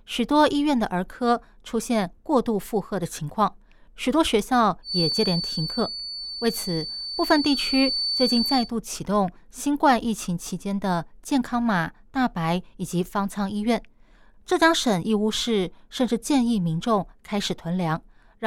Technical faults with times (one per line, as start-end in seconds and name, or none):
4.82-8.72 feedback whistle